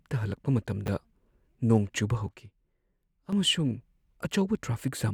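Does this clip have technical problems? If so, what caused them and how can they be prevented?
Yes. Between 0.86 and 0.88 s, chunks arrive out of order. A 10 ms chunk plays one chunk late and swaps places with its neighbour, making a brief jumbled blip. The waveform shows three hard joins, and the spectrogram shows thin vertical broadband lines. To prevent this, use a sequence-checked jitter buffer that reorders chunks before playback.

From 2.29 to 3.33 s, a sudden gain jump drops the sound and the background noise together by about 8 dB, then restores them just as abruptly. The likely cause is a digital gain setting applied without a ramp. The waveform envelope steps down and back up, and the spectrogram dims across all frequencies. To prevent this, ramp every gain change over a few milliseconds.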